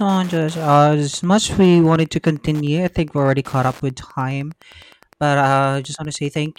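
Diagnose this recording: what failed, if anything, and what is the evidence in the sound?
Wi-Fi interference in the analogue wiring. Faint ticking runs under the speech throughout, repeating every 102.4 ms. A nearby radio's beacon is rectified by the circuit.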